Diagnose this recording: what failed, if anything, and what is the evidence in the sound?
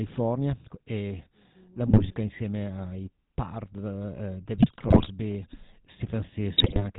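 GSM full-rate codec, present for the whole clip, is a codec-stage fault and plainly audible. The speech carries the buzzy, gravelly roughness of this coder, and nothing reaches above 4 kHz. This fits the 13 kbps full-rate scheme. It models the vocal tract as a filter and excites it with a regular pulse train that keeps only every third excitation sample. That coarse excitation is what gives the voice its rough, buzzing texture.

GSM bit errors occur at 1.87–2.14 s (after "e la", before "insieme ai"), 4.54–5.10 s and 6.58–6.84 s. These are network-stage faults on the radio link, with corruption passing into the decoder. In each patch the speech breaks into squawks, pops and gargling, and the middle burst lasts longest. Flipped bits in the filter, pitch or gain parameters warp the spectrum or throw the level around frame after frame until the clean signal returns.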